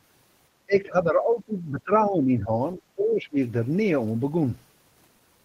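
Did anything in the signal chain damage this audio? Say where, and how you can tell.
Yes, the call processing stage: speech suppressed in double talk, likely. The speech level dips from 0.66 to 2.53 s, by roughly 15 dB at worst, then again from 2.75 to 3.37 s, down about 20 dB. The echo canceller couldn't tell the near talker from loudspeaker echo and turned both down.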